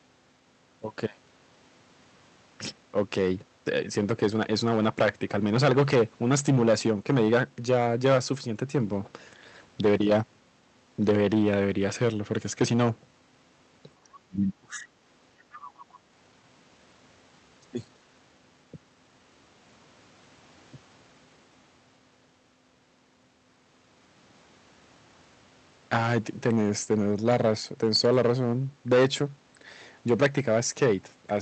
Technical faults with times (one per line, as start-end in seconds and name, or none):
0.00-31.41 hard clipping
14.03-14.86 speech suppressed in double talk
15.52-15.69 other side's voice leaking through